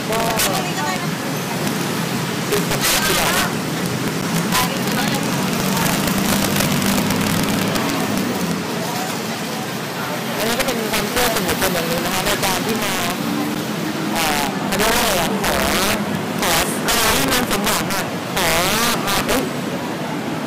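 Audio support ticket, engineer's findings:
Integer overflow throughout. Violent cracks on loud peaks, sharper than clipping. Gain drives about 13 dB over full scale; a few percent of samples wrap to opposite sign.

Block of digital silence at 4.21 s and 13.55 s. Each a hard 10.7 ms dropout, heard as a tick. Fits a missed 512-sample output buffer.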